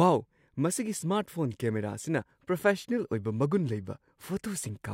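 Nothing in this recording stands out as a technical fault; the speech comes through as recorded without any audible glitch, dropout or distortion along the way.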